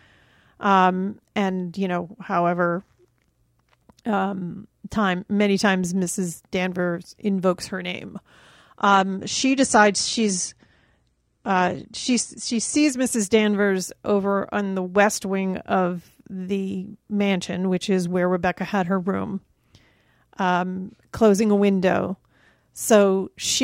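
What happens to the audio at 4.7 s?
Nothing goes wrong at 4.7 s; the speech there carries on intact, with no dropout, click, distortion or other audible fault at that moment.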